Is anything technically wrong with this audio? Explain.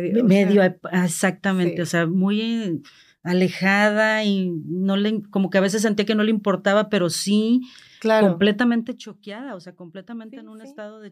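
No, nothing is technically wrong.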